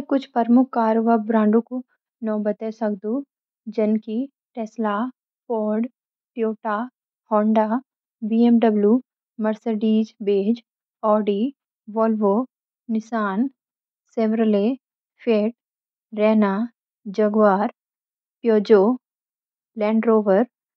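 Listening through the speech recording, nothing stood out at any point.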